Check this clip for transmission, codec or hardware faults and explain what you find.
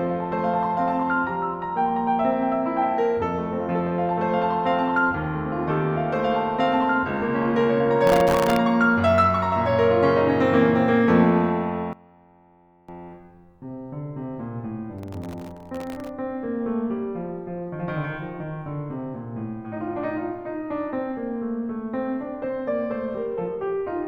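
Two kinds of fault are audible in this music clip: processor overload crackle in two bursts and, briefly, a collapse that points to one channel inverted.

Processor overload crackle runs from 8.07 to 8.57 s and again from 14.99 to 16.09 s. The processor keeps missing its deadlines on very short buffers, well under a millisecond each, so dozens of tiny slices get filled with stale audio. Unlike a network dropout, there are no audible gaps, only a gritty tearing laid over the music.

From 11.93 to 12.89 s the music drops by about 20 dB, with the centred content and bass nearly gone while a faint residue remains. The likely cause is one channel inverted, cancelling the shared content when the channels sum. Unlike a dropout, it never falls fully silent.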